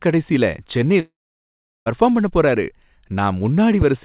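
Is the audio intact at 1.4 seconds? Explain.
No, 1.4 s sits right in the middle of a long network dropout running from 1.0 to about 1.88 s. Most likely the audio stopped arriving. The receiver stretches the last bit of sound into a short fading buzz, then about 0.73 s of near-silence follows. At 1.4 s you're hearing that empty stretch. The sound picks back up at "பண்ண போறாரு", with the missing part never played.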